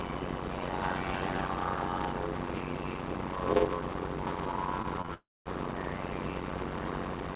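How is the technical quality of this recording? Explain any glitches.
The recording has three kinds of fault: a steady buzz with slowed playback throughout, brief concealment glitches just before 5.1 s, and a longer gap after that. The call path's G.711 mu-law coding cuts everything above 4 kHz.

Throughout, a buzz at about 92 Hz sits over the sound, which plays at roughly 0.53 times normal speed. This is a block size mismatch (padded): short blocks, which fits 256 samples, are read into larger ones and zero-filled, adding a gap at each block.

At 4.82 to 4.86 s, 5.02 to 5.06 s and 5.06 to 5.10 s there are short smears. Each is short concealed packet loss: about 20 ms of audio never arrived, and the receiver extended the preceding sound to cover the hole.

From 5.14 to 5.47 s the sound turns into a fading continuation, then about 0.23 s of near-silence, before resuming past the missing stretch. 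This is likely a long network dropout, where roughly a third of a second of audio failed to arrive.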